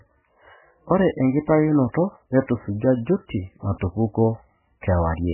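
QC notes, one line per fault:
Throughout, MP3 compression: heavy codec damage, nothing above 3 kHz, and a watery, swirly texture as weak frequency lines drop in and out between frames, with chirpy s sounds and smeared attacks; likely a very low-bitrate encode, consistent with about 8 kbps.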